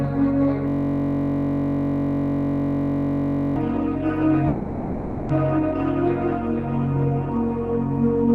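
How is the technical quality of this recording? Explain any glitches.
The recording has two clear glitches in the music, both of which interrupt playback for a noticeable stretch.

From 0.68 to 3.56 s there is a system hang loop. The playback system froze while the audio hardware kept replaying the same 21.33 ms slice, which fits a 1024-sample buffer, well over a hundred times. Because the loop is so short, it comes across as a steady buzz at about 46.9 Hz instead of a stutter. On a waveform, an identical small shape tiles across the whole span. A spectrogram shows rigid horizontal lines at 46.9 Hz and its harmonics.

From 4.47 to 5.32 s the music stops moving forward. The last sound is stretched out as a fading buzzy hiss for about 0.82 s, with no silent gap. The music then picks up exactly where it left off, with nothing skipped, so everything afterward runs 820 ms late. This is a call audio freeze, likely caused by delayed packets draining the jitter buffer. 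A spectrogram shows a smeared, decaying band, and the waveform shows a tapering, texture-less stretch.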